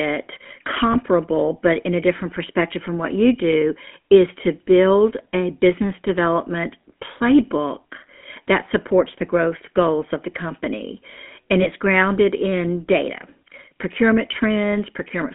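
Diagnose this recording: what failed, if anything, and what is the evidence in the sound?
Codec stage: the whole clip has that buzzy, gravelly GSM full-rate codec roughness, squeezed into a roughly 200 Hz to 3.4 kHz phone band, which fits a 13 kbps coder.

Network stage: there are lost GSM frames at 0.92 to 0.97 s and 11.62 to 11.68 s, just before "grounded in data procurement". Each one is a brief metallic ring where the decoder repeated the last good frame.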